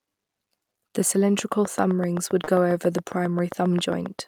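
From 1.39 s to the end, a train of clicks ticks over the speech at a regular 7.5 per second, peaking about 10 dB above it, likely interference pulses. At 2.44 to 2.48 s, short concealed packet loss leaves about 30 ms missing; the decoder extends the preceding sound across it, heard as a brief smear.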